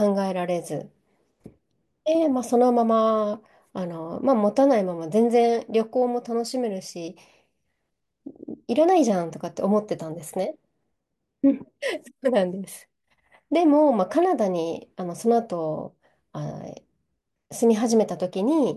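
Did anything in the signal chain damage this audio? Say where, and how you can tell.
No, none of the stages in the chain left any audible damage on this speech recording.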